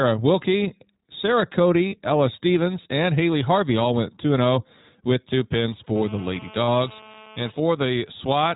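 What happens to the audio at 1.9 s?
For a moment around 1.88 to 1.94 s the sound turns into a held, slightly buzzy, breathy vowel-like tone before it snaps back to normal. These are lost iLBC frames. About 40 ms of data went missing, which fits two 20 ms frames. The decoder filled the hole by repeating the last pitch cycle blended with noise. Because each iLBC frame is decoded independently, the speech recovers almost immediately after the gap.

Throughout this moment, and the rest of the clip, the speech is muffled and a little rough and synthetic. This is plainly audible iLBC codec damage. The narrowband codec keeps nothing above 4 kHz, and its coding of each frame's excitation leaves a grainy, artificial edge. The sound fits iLBC's 20 ms mode at about 15.2 kbps.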